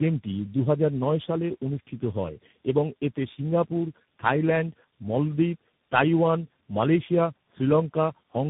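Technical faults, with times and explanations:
Throughout, tandem speech coding: rough, muffled, warbly speech, nothing above 3.8 kHz, fitting roughly three speech codecs in series, each re-coding the last one's damage.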